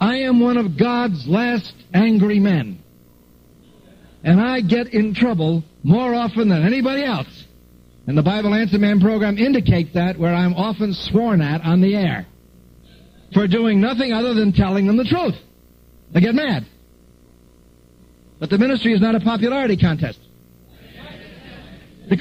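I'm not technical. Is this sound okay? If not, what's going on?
No. All the way through, a low, quiet buzz sits under the sound, with fizzy hash above it and a high whine near 15.7 kHz. This is video or display buzz: a screen or video cable is leaking its roughly 60 Hz picture rhythm into the audio.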